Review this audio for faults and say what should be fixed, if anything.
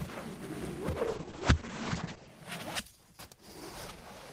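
A call bitrate drop runs from 1.05 to 2.35 s. The encoder falls back to coarse coding, roughly 32 kbps down to about 9 kbps, and the top end is cut from 20 kHz to 8 kHz, leaving the sound muffled and watery for about 1.2 s. Prevent this by smoothing the bandwidth estimator's reaction to short congestion and setting a higher minimum bitrate floor.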